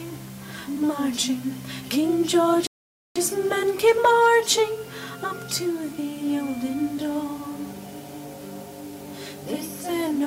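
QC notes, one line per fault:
2.67–3.16 s, playback stall: output drops abruptly to silence in mid-flow for 0.49 s, then the sound resumes. The hard cut with no fade is most likely the player running out of buffered data or its output thread being blocked until it recovered.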